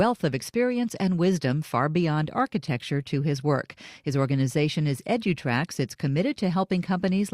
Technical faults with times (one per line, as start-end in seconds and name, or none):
none